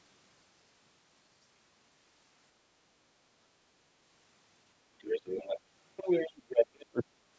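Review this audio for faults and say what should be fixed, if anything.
A faint second voice, the other side's voice leaking through, appears under the talker from 5.04 to 5.59 s at about 20 dB below the speech, then returns more strongly from 5.97 to 6.85 s at roughly 10 dB below. The likely cause is the far end playing on the talker's loudspeaker and reaching the microphone, with the echo canceller leaving a residue it failed to subtract.

Right after that, from 6.90 to 7.03 s, the talker's own speech is suppressed in double talk: it drops sharply, by around 40 dB at the deepest point, for about 150 ms in total. The likely cause is both sides speaking at once, so the echo canceller could not tell the near voice from the loudspeaker echo and attenuated everything together. The result is a brief hole in the talker's speech. The call microphone processing's band limit, with nothing above 8 kHz, is part of the normal path.

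To prevent both faults, use a headset or better acoustic separation between loudspeaker and microphone, and tune the echo canceller's double-talk detection so it keeps near speech while removing the echo.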